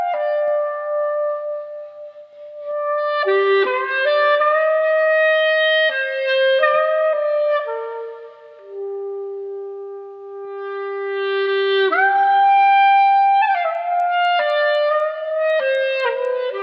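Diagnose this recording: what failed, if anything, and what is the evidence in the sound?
Sample-rate conversion: the resampler restarted on every 250 ms block, leaving an error at each block edge, heard as regular 4 Hz ticks from 13.75 s onward.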